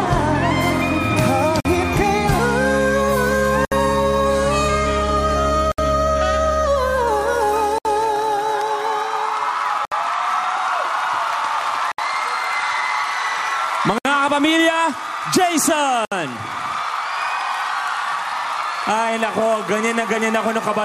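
Short dropouts at 1.60, 3.65, 5.72, 7.78, 9.85, 11.92, 13.98 and 16.05 s, about every 2 s, are each a gap at a join of encoded pieces: untrimmed encoder delay and padding between chunks. The first lasts 48 ms, the rest 67 ms, with smeared edges.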